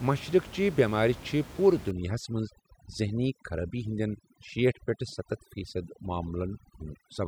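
From 1.91 s to the end, overdone noise removal sets in. Frequency bands near the room noise floor get cut hard, leaving twinkling specks and taking quiet parts of the speech with them.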